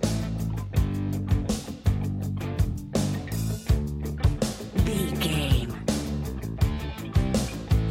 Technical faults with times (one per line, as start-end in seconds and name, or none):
none